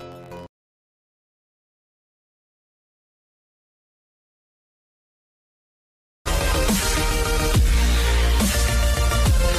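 From the start to 6.58 s, a block size mismatch (truncated) means one stage writes longer blocks than the next reads, which fits 512-sample writes, so each block's tail is discarded. The audio buzzes at 91.9 Hz and runs 1.07 times fast at near-normal pitch.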